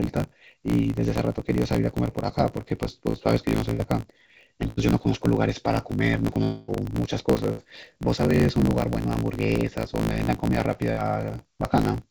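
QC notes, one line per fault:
throughout: block size mismatch (truncated). A steady 54.4 Hz buzz runs under everything. The audio plays 1.16 times fast at normal pitch. Block ends are being dropped, which fits 1024-sample blocks.
3.10 to 3.26 s: short concealed packet loss. About 40 ms is filled by continuing the previous sound. It is heard as a brief smear.
3.70, 4.68, 7.52 and 10.92 s: burst of packet loss. Gaps of 100, 100, 60 and 60 ms become held buzz or fading hiss. The audio then resumes further on, with material missing.
6.44 to 6.70 s: long network dropout. A 280 ms stretch becomes a continued, fading buzz or hiss, never reaching silence. The likely cause is no packets arriving for that time.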